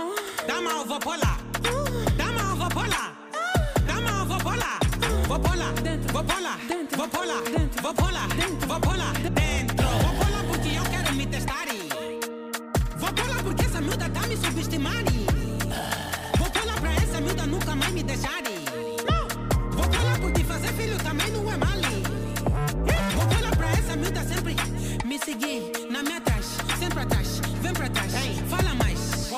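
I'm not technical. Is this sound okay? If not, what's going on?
No. At about 9.27 s the sound suddenly jumps forward with a tiny blip, as if a short piece had been cut out. This is a stream segment skipped: online audio arrives in small chunks, and one chunk likely failed to load, so the player moved straight on to the next. Unlike a dropout, there's no silent gap and no pause while it catches up. The sound simply leaps ahead.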